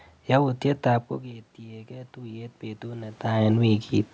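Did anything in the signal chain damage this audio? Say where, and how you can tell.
Yes. Automatic gain rising in the call processing, 1.22 to 3.27 s: after the input drops about 16 dB near 1 s, gain climbs about 7 dB over two seconds. Room noise swells with the speech, so it's gain control, not the talker moving.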